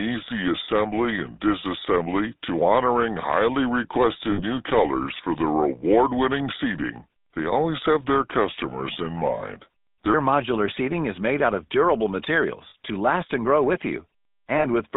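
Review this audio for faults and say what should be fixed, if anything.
GSM full-rate codec, throughout: the speech is squeezed into a line band of about 200 Hz to 3.7 kHz and carries a constant buzzy, gravelly roughness. This comes from the vocal-tract model being driven by a sparse pulse excitation, which is consistent with the 13 kbps full-rate coder. Route the call through a wideband or higher-rate codec so the excitation and upper band survive.

Section at the wrong speed, 0 to 10.14 s: until "modular seating is made", the speech runs at 0.771 times normal speed. It sounds slow and deep, roughly five semitones low, because speed and pitch drop together. This is likely from playback or editing against the wrong clock. Check sample-rate and clock settings at every edit and playback stage before export.

Lost GSM frames at 4.32–4.42 s, 9.38–9.41 s, 12.70–12.75 s, and 14.58–14.65 s (just after "and grow with you"): each gap is 20 to 60 ms long. 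In each one the last good frame is repeated, which leaves a short metallic ring in place of the missing sound. Improve radio coverage or add error protection and retransmission on the link to reduce frame loss.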